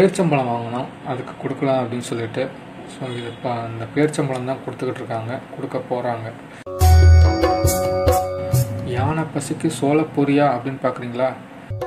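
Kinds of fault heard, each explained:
Adaptive stream starting at a low bitrate: the first 4 s have synthetic, smeared treble, then quality jumps without a gap once the player switches up.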